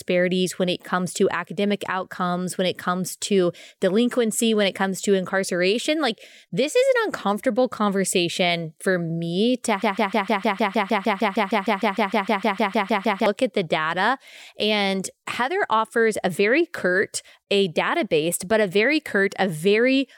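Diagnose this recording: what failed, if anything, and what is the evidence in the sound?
From 9.82 s to 13.26 s, after "conversation for me to", a broken-record loop repeats one 153 ms fragment 22 times before "at the data". A stalled playback or stream buffer likely resent its last block. Unlike a dropout, no silence occurs, but that audio is lost.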